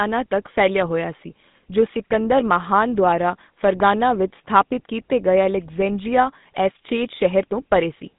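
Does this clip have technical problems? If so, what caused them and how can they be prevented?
Yes. Throughout the speech there is a buzzy, gravelly roughness, and everything is confined to a narrow telephone band of roughly 150 Hz to 3.7 kHz, with nothing at all above 3.8 kHz. This is the GSM full-rate codec. It rebuilds the voice from a vocal-tract model excited by regularly spaced pulses, discarding most of the excitation detail. The plainly audible damage fits its 13 kbps rate. To prevent it, record or transmit through a wideband path or a modern codec.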